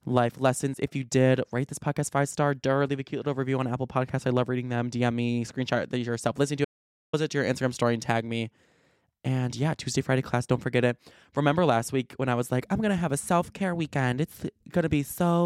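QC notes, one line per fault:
6.65–7.13 s, audio dropout to silence: just after "screenshot yourself listen to" the speech cuts off mid-flow and the track falls to silence, with no room tone or hiss underneath, for about 0.49 s before resuming at "it to your". The dead-flat gap points to the input signal likely being lost for that moment, through a dropped connection or momentary mute, while recording carried on writing silence, so whatever was said in that half-second is gone.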